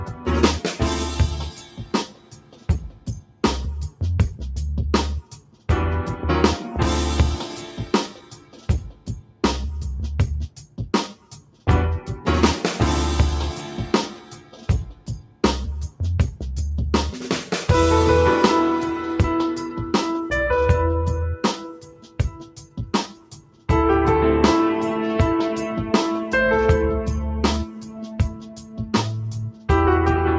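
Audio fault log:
Throughout, noise suppressor applied to music or sounds: a speech-tuned suppressor treats sustained, steady material as noise, so gain swings by roughly 10 dB and the sound pumps and thins. On a waveform the envelope breathes unevenly, and a spectrogram shows held components fading behind transients.
0.07–0.27 s, 1.47–4.01 s, 5.23–5.69 s, 7.84–9.43 s, 10.48–11.67 s, 14.16–16.0 s, 21.57–23.69 s, 27.65–29.69 s, sound cut by the noise suppressor: steady or decaying sound is pulled down by about 8 to 12 dB and tails end early. The waveform shows sunken stretches, and the spectrogram shows dimmed bands with truncated decays.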